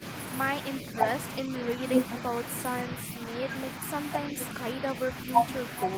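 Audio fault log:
0.82–1.06 s and 1.45–1.81 s: speech suppressed in double talk. The speech dips by around 5 dB in brief patches, likely because an echo canceller turned everything down while both sides talked at once.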